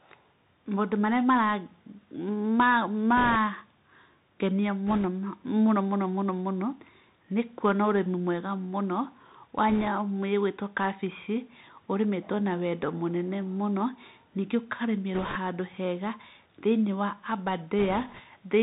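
Speech runs throughout as muffled, narrowband audio with scratchy s sounds and a granular hiss, the sound of the Bluetooth CVSD headset codec, which fits a 64 kbps link that passes nothing above 4 kHz. Brief rushing, crackly bursts without loud clicks at 3.17–3.36, 4.88–5.06, 9.69–9.88, 15.14–15.36 and 17.79–18.21 s are bit errors on a Bluetooth voice link, with a few percent of bits flipped.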